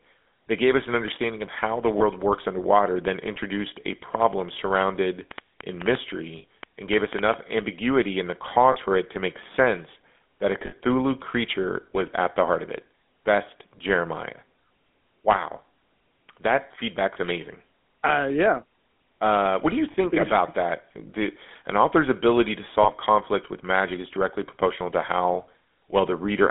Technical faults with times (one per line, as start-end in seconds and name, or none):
0.00-26.50 GSM full-rate codec
1.98-2.03 lost GSM frames
5.31-7.35 train of clicks
6.38-6.44 lost GSM frames
8.72-8.77 lost GSM frames
10.66-10.73 lost GSM frames
17.14-17.17 lost GSM frames
19.92-19.95 lost GSM frames
22.82-22.91 lost GSM frames